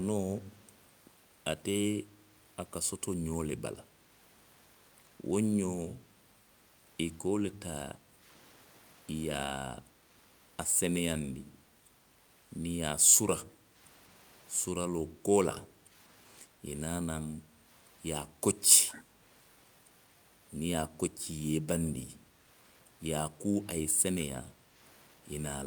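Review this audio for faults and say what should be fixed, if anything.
Echo leak at 0.63–0.77, 15.52–15.58 and 18.88–19.04 s. A faint copy of the speech returns about 204 ms late. It is barely audible at first, then clearer. The likely cause is the far-end echo canceller missing loudspeaker sound.

Background gated by the echo canceller at 7.96–8.24, 13.5–13.76, 15.05–15.93, 16.47–16.62 and 24.49–24.75 s. The room sound dips by about 6 to 9 dB while the loudspeaker plays, then recovers.

Better echo cancellation on the far-end device, or a headset in place of its loudspeaker, would prevent both.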